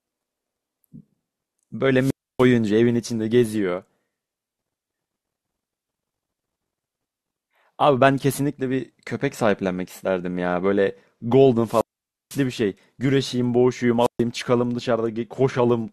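Wireless microphone squelch dropout occurs three times in this speech: from 1.98 to 2.48 s with about 0.29 s of muting, from 11.64 to 12.45 s with a 0.5 s mute, and from 14.00 to 14.22 s with a 0.13 s mute. Each time the FM radio link weakens, hiss briefly swells, and the receiver's squelch cuts the output to near silence until the signal recovers and the voice returns.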